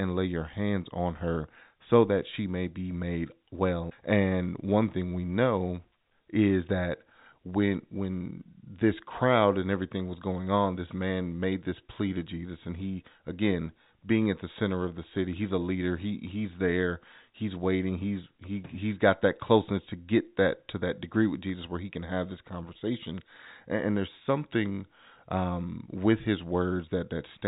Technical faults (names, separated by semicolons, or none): none